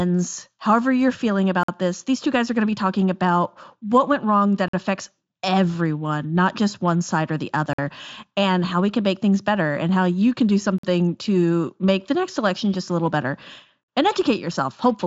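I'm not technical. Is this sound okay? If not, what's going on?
No. The speech keeps dropping out for a moment, a tiny, sharp-edged hole of silence about a twentieth of a second long, at 1.63, 4.68, 7.73, 10.78 and 13.83 seconds (for example, between "however you're feeling" and "this these two guys"). This is a gap between chunks. The audio was handled in three-second pieces, and a bit of silence was slipped in at each join, so nothing is missing but the flow breaks regularly.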